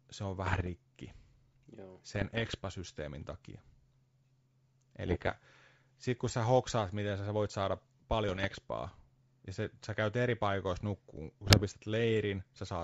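Bit errors on an ADPCM link at 0.44–0.69 s after "se on", 2.15–2.58 s, 5.07–5.32 s, and 8.29–8.56 s after "miten sä voit saada" give pops and rough bursts. Corrupted bits, at an error rate of around 0.7 to 1 percent, upset the decoder's predictor. From 10.07 s, after "ja se sä", a USB whine at a fixed 8 kHz, about 35 dB below the speech, runs to the end. It is bus frame current leaking into the audio. A final ADPCM error burst falls at 11.44–11.65 s.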